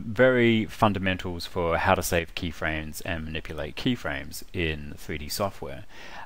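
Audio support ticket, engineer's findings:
About 6 dB step down at 2.19–2.29 s, never silent. Likely one channel drops out before the mono sum. Shared content halves rather than muting, unlike a full dropout.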